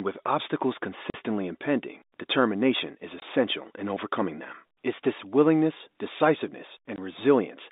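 Packet loss filled with silence at 1.10–1.14 s, 3.20–3.22 s and 6.96–6.98 s: the receiver played silence in place of missing packets, leaving hard-edged gaps of 40 ms after "with obstacles" and 20 ms before "in overcoming them", which fits 20 ms packets.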